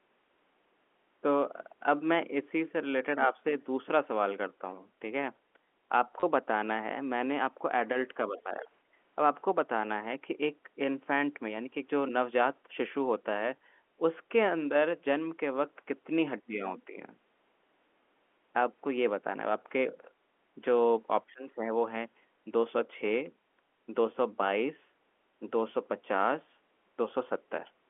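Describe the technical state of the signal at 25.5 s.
At 25.5 s the speech is intact, with no fault present, only the narrow telephone band of G.711 coding audible as the usual limit on its bandwidth.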